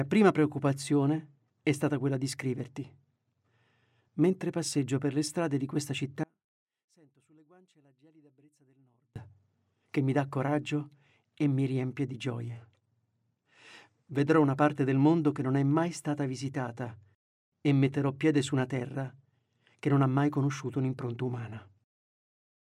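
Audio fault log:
6.24–9.16 s, one channel inverted: the sound collapses by about 35 dB for roughly three seconds, leaving only a faint residue before full level returns. The likely cause is one stereo channel flipping polarity, so when the two sides are summed to mono their shared content cancels and only their small differences survive. On a waveform the envelope drops abruptly to a sliver; a spectrogram shows the band dimming across all frequencies.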